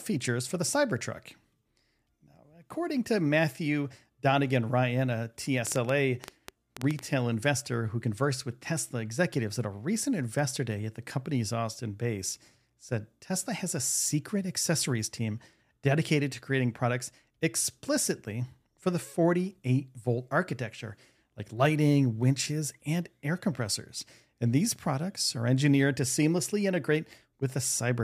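A train of clicks runs from 5.67 to 7.00 s, before "investor who conversed with": about ten uneven ticks at 7.6 per second, about 15 dB above the speech, likely from nearby interference.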